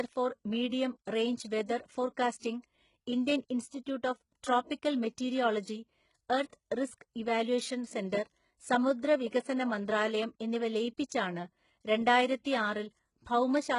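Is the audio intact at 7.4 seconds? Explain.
No. At 7.4 seconds, as throughout the clip, the speech has gritty, metallic s sounds and a treble that sounds synthetic. Nothing reaches above about 11.1 kHz. This is likely HE-AAC compression at heavy damage, which fits a bitrate around 12 kbps. Only the lower spectrum is truly coded. The upper bands are rebuilt by copying lower ones upward under a coarse envelope, so the harmonics fail to line up across the crossover.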